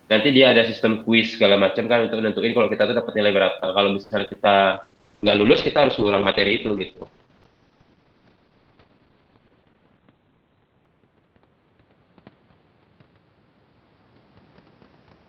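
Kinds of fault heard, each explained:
Repeated packet loss (robotic sound): Between 4.03 and 4.37 s, packets went missing five times in quick succession, the longest gap 70 ms. The receiver patched 140 ms by stretching earlier sound and left 80 ms empty, so the speech turns choppy with pieces missing.
Call bitrate drop: From 4.72 s to the end, the encoder's budget fell from 32 to 8 kbps, holding at its lowest for about 5.9 s. Bandwidth narrowed from 20 kHz to 4 kHz, so the speech sounds muffled, coarse and watery.
Jitter buffer speed-up: From 9.05 to 9.50 s, the receiver had built up excess buffered audio and trimmed short pitch-period slices, about 70 ms in total, to reduce delay. The speech runs at 113% speed with unchanged pitch, sounding briefly hurried.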